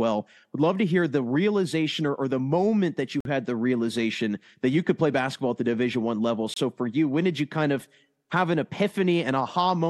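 A likely Bluetooth stall, with interference delaying packets until the headphones' buffer emptied, halts the speech twice. From 3.21 to 3.25 s, after "the moment that you", a 48 ms silence falls before "had the realization that" resumes. At 6.54 to 6.57 s a 26 ms gap precedes "for you when did".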